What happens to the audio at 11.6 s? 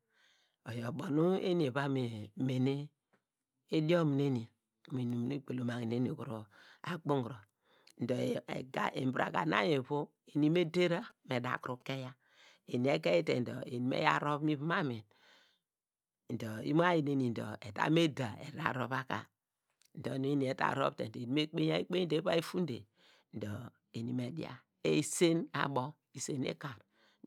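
A nearby 2G phone is exchanging signalling with its network, and the audio circuitry rectifies its radio bursts into the signal. At 11.6 s you are inside these GSM signalling bursts, which run from 10.54 to 11.82 s. The interference is a galloping dit-dit-dit of short buzzes repeating at 217 Hz. It sits roughly 30 dB below the speech, so it chatters faintly underneath rather than covering it.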